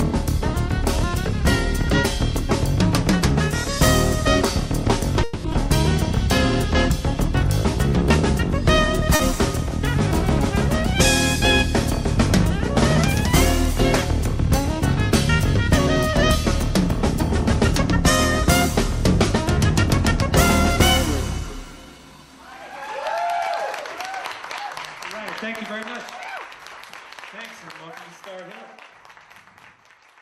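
A call audio freeze starts at 5.23 s and runs to 5.47 s. For about 210 ms the last sound is stretched into a fading buzz-like tail, and nothing is lost. The audio then picks up exactly where it stopped, so the effect is an inserted pause. The likely cause is packets held up in transit long enough for the jitter buffer to run dry, with the receiver extending the final sound until delivery resumed.

Right after, from 5.52 to 5.56 s, comes a skip ahead. Playback jumps forward with only a brief 10 ms bridge, and roughly a tenth of a second of material is gone. The two sides of the cut are butted nearly together. A stretch of audio was dropped, either in transit or by an overflowing jitter buffer, while later audio was already waiting, so playback jumped ahead.

At 9.15 to 9.22 s there is a short concealed packet loss. About 40 ms of audio never reached the decoder in time. The receiver covered the hole by extrapolating from the preceding sound and cross-fading back into the real signal, which is heard as a quick smear or wobble.

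From 21.41 to 22.13 s a jitter buffer speed-up makes the audio run at about 111% of normal speed with its pitch unchanged, so the passage sounds hurried. The buffer was holding more audio than its target. To bring the delay down, it trimmed many pitch-period-sized slices in quick succession, removing roughly a tenth of a second in total over that span.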